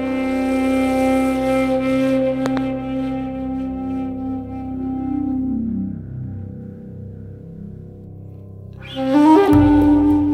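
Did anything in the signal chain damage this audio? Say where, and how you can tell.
Yes. Two sharp loud pops land between 2.46 and 2.59 s, peaking roughly 15 dB above the surrounding sound, which continues unbroken beneath them. That points to the analogue wiring stage, likely a voltage spike from a plug, switch or static discharge, shaped into a brief double thump.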